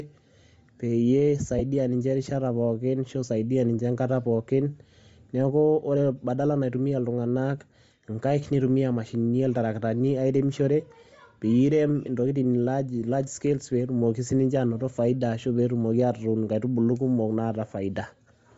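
Throughout the speech, the upper spectrum sounds grainy and noise-filled, with a breathy edge, likely Bluetooth LC3 compression at a low rate consistent with about 32 kbps. From 1.59 to 1.62 s there are lost LE Audio frames: a 15 ms gap, consistent with two 7.5 ms frames, where concealment reuses the previous spectrum and produces a brief noisy smear.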